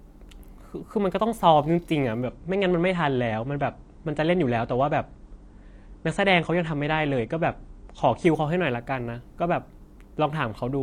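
A speech clip in which an adaptive stream at a lower bitrate takes over from 2.26 s to 8.26 s: the quality falls abruptly, with nothing above about 9.8 kHz and more codec artefacts, then recovers just as suddenly, which fits a switch from roughly 96 to 32 kbit/s AAC after the connection slowed. Unlike a dropout, there is no gap or silence, and unlike a fixed low-pass filter, the dulling lasts only for that stretch.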